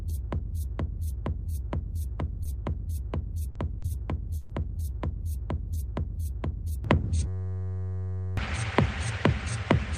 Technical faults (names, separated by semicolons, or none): short concealed packet loss; lost packet rebuilt from error correction; burst of packet loss; input switched to a poorer device; system hang loop